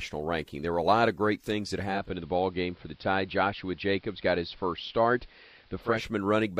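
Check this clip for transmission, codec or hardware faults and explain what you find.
There is one fault: digital radio blending to analogue. After "of great things that", at 1.81 s, the receiver lost digital and faded over 0.33 s to the AM signal. Faint hiss appears. Level drops about 1 dB. Digital returns at 6.13 s.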